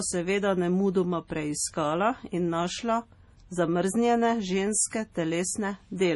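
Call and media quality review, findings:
MP3 compression, throughout the clip. Symptom: watery, swirly speech with metallic, chirpy s sounds and smeared consonant onsets. Nothing above 11.4 kHz. Probable component: likely a low-bitrate MP3 encoder; damage this heavy points to around 32 kbps. Mechanism: a starved bit budget zeroes weak frequency lines, which flicker on and off between frames, and the treble is cut at a fixed ceiling. Distinguishing: a plain low-pass filter removes the top cleanly, without the swirl or chirps.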